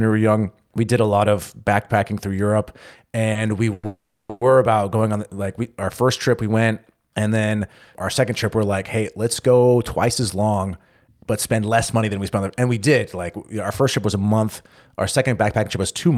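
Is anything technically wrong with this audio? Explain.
Yes, there are three kinds of fault in this speech clip.

A short stall from a late packet occurs at 3.33–3.36 s. One packet arrived late and the jitter buffer ran dry, so the last sound was held for about 20 ms before playback resumed, with nothing lost.

Call audio freezes follow, at 3.73–3.84 s, 3.86–4.30 s and 4.30–4.42 s, most likely because packets were held up and the buffer emptied again. The receiver continued the last sound as a fading buzz or hiss for 100 ms, 430 ms and 110 ms. The middle freeze dips to about 10 ms of silence. Each time, playback resumed where it stopped.

Jitter buffer speed-ups run from 10.08 to 12.11 s and from 15.18 to 16.14 s. Extra buffered audio was trimmed by removing pitch-period slices, around 150 ms and 50 ms in total. The speech sounds hurried at 106% and 105% speed with unchanged pitch.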